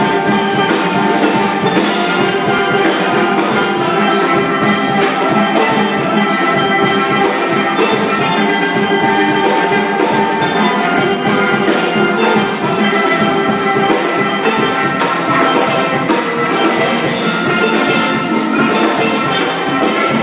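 No technical faults are audible.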